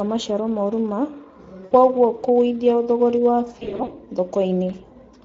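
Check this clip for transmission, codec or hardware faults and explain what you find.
Yes, there are faults: codec damage throughout and two concealed dropouts.

Across the whole clip the speech sounds grainy and hoarse, with a thin, noise-filled top. This is the Speex codec. CELP coding gives the excitation too few bits to reproduce the voice cleanly, and the damage fits a setting around 16.8 kbps.

At 1.65–1.72 s, just before "kũgũithia thogorĩ", and again at 3.59–3.93 s, just after those words, the speech smears into a buzzy or noisy sound that fades. This is VoIP packet loss concealed by the speech codec. The decoder extrapolates from its last pitch and filter while gain drops. The first gap points to about 60 ms lost. The second is scattered, runs up to 40 ms, and leaves the voice weak afterwards.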